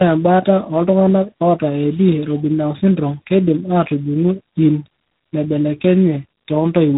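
Tandem speech coding runs through the whole clip: the speech has passed through two low-rate speech coders in a row, which fits an 8 kbit/s G.729A link handed on, via an ordinary 64 kbit/s A-law stage, to a 24 kbit/s G.726 link. The second coder re-encodes the first one's already damaged output, so their errors stack. The speech sounds rough and warbly, and with nothing above 3.8 kHz it is also dull and muffled.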